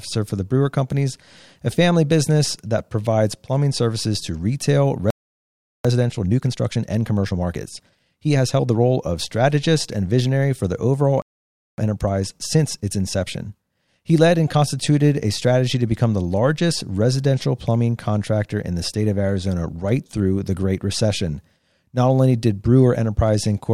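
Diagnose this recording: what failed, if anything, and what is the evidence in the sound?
The fault sits at the playback stage. A playback stall cuts the speech off right after "plumbing services to retail" and leaves silence from 5.10 to 5.85 s, about 0.74 s. A second stall runs from 11.22 to 11.78 s, about 0.56 s. On a waveform each one is a flat line in mid-phrase. On a spectrogram each is a blank vertical band across all frequencies. The likely cause is that the player's buffer ran dry or its output thread was blocked.

Time-compressed catch-up follows each stall. The first runs from 5.85 to 8.81 s at 1.25 times normal speed and ends before "of strategist and visionary". The second runs from 11.78 to 14.78 s at 1.1 times, from "visionary for the overall" to "a strategy to become". Pitch stays put, so on the spectrogram the harmonic spacing is unchanged while syllables crowd together horizontally. 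Small cross-faded splices do the shortening.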